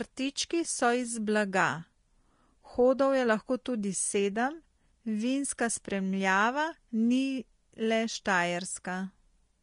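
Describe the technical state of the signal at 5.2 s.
At 5.2 s the speech carries the same damage that runs through the whole clip: nothing is present above 10.6 kHz, and the remaining treble is hissy and grainy, with consonant attacks smeared. This is likely Vorbis compression at a low setting, consistent with roughly 34 kbps. The encoder lowers its cut-off and quantises the upper residue so coarsely that fine detail turns into noise of similar energy, which roughens the tone.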